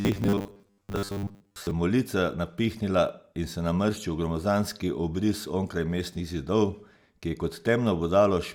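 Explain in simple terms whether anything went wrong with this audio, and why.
From 0.01 to 1.71 s, new audio was likely arriving too slowly, so the playback software kept repeating a tiny slice of sound, about 10 ms long, to fill the gaps and skipped much of the real audio. Most of the sound in that stretch is repeats. This is called robotic sound from repeated short buffers. Those rapid repeats impose a fixed 100 Hz buzz, so the speech turns stiff and metallic while still loosely following what is said.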